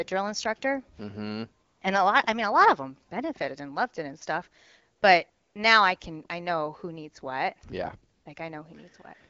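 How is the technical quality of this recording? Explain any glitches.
The recording is carried over AMR wideband (HD Voice), and its light coding sound fits a rate near 12.65 kbit/s. Four short gaps are the glitches.

AMR comfort noise occurs at 1.65–1.81 s, 4.97–5.01 s, 5.29–5.55 s and 8.13–8.25 s. Each time, the phone treated the sound as silence and stopped sending speech frames. The receiver filled the gap with synthetic noise. The real background drops out briefly, and a smooth, steady hiss switches in instead.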